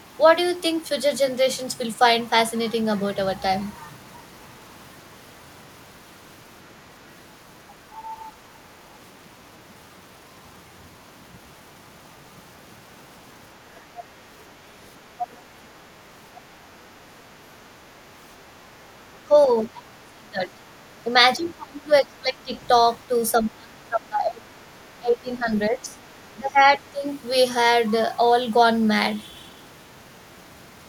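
From 15.18 to 15.79 s the other side's voice is leaking through, sitting roughly 10 dB under the talker. This is likely residual loudspeaker echo that the echo canceller failed to remove from the microphone. A fainter scrap of it, around 30 dB down, follows at 16.35 to 16.41 s.

Speech is then suppressed in double talk. First comes a brief dip of about 10 dB at 18.61 to 18.67 s. Longer stretches follow from 19.28 to 22.54 s and from 23.08 to 27.06 s, with the talker pulled down by as much as about 25 dB and roughly two seconds of each stretch affected. The likely cause is that the canceller could not separate the talker from the echo while both sides spoke, so it attenuated both.

Inside that second stretch, from 25.57 to 26.28 s, the other side's voice is leaking through again. It is very faint, around 35 dB below speech, and is likely echo that the canceller left behind.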